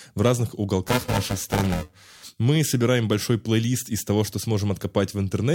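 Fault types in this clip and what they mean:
Buffer tearing: from 0.86 to 2.24 s, a robotic buzz at 375 Hz rides on the speech, which fits a 128-sample buffer. The writing side and the playback hardware have drifted so their positions cross inside each buffer period, leaving about half of every buffer filled with audio roughly ten milliseconds old. The hard joins on either side of that stale stretch repeat once per buffer, producing a steady rattle that sounds only while speech is present.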